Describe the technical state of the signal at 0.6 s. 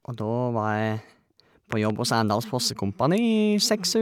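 At 0.6 s the signal is intact, with no audible fault at that moment.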